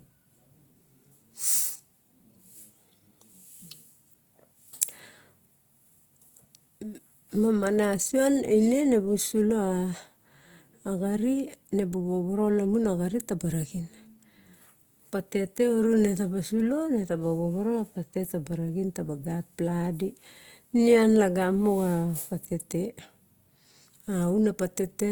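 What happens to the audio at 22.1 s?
At 22.1 s the speech sounds rough and grainy, with a noisy texture in the upper bands rather than swirling holes. It is likely Opus compression, present throughout, in its music (CELT) mode at a rate that fits about 24 kbps, keeping each band's energy but filling thinly coded bands with folded or noise content. Bandwidth stays full, up to 20.2 kHz.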